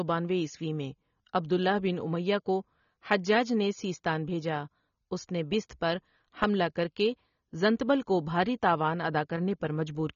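From start to finish the speech carries plainly audible AAC compression: nothing survives above about 7 kHz, so it sounds dull, with a swirly, fizzy edge on sibilants and held sounds. That's what you'd expect from AAC-LC squeezed down to around 24 kbps, the likely cause.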